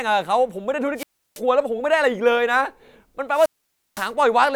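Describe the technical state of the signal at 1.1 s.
Wireless microphone squelch dropout, 0.95 to 1.41 s: the radio link fades, hiss rises, and the receiver's squelch mutes the output for about 332 ms before the speech returns.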